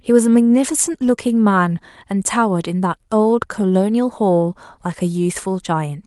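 No technical faults can be heard anywhere in this speech recording, and the signal holds steady throughout.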